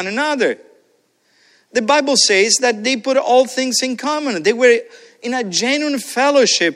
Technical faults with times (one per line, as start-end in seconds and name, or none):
none